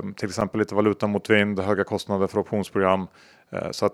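A sharp tick interrupts this speech recording at 0.41 s. It is a block of digital silence: for about 5 ms the signal drops straight to silence and then returns, with no fade on either side. Because the gap is so short it is heard as a tick rather than a hole. A short run of silence like this fits an output buffer that was not filled in time.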